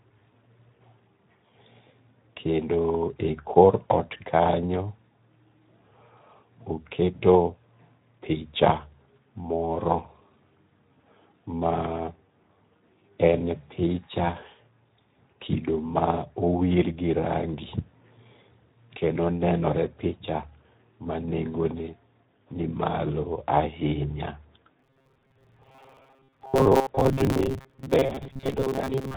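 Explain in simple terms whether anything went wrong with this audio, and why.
Speech throughout carries Speex codec damage. It sounds hoarse and noisy. From 24.79 s to the end, robotic sound from repeated short buffers appears. A rigid 134 Hz buzz likely comes from roughly half the audio being replaced by repeats.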